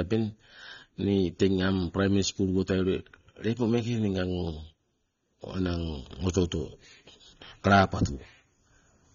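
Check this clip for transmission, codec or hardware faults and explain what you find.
One codec fault, present throughout. Throughout, heavy AAC compression, likely AAC-LC at a low bitrate near 24 kbps, strips content above 7 kHz, leaving the speech dull, smeared and warbly.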